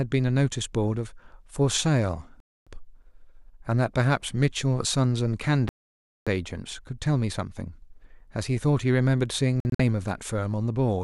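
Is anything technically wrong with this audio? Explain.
Yes. Digital broadcast dropouts cut the speech at 2.40 to 2.67 s, 5.69 to 6.27 s, and 9.60 to 9.80 s, the last as scattered holes up to 48 ms. The receiver muted on failed frames, losing that speech. The waveform goes flat, with blank vertical bands on the spectrogram.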